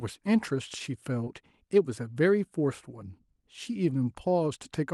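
At 1.24 to 1.27 s there is a short concealed packet loss: about 20 ms of audio arrived too late to decode, so the receiver extended the preceding speech to bridge the gap before crossfading back. It comes across as a brief smear or wobble, heard against call-codec audio band-limited near 12 kHz.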